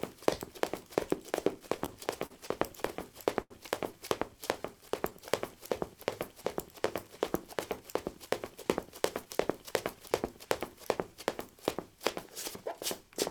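Between 1.59 and 2.32 s the sound stutters: repeated stalls, five short gaps totalling 88 ms, the longest 42 ms, about 12% of that stretch. Packets were arriving late, so the jitter buffer kept running dry, and the receiver extended the last sound each time until data resumed. A second burst follows from 2.86 to 3.52 s, again five gaps, 122 ms in all, with an 82 ms hold that is long enough to fade. Nothing is lost, but the sound drags and catches.

From 4.37 to 5.61 s there is a jitter buffer slow-down. The buffer was low, so the receiver rebuilt its reserve by repeating single pitch periods or fragments of quiet, adding 59 ms in total. Playback runs at 96% speed with unchanged pitch, so sounds are slightly drawn out across that span.

From 7.54 to 9.95 s the opposite correction occurs, a jitter buffer speed-up. The buffer held more audio than its target, so the receiver trimmed short pieces of one or a few pitch periods, removing around 150 ms. 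The sound plays at about 105% speed with its pitch intact, and events in that stretch come across slightly hurried.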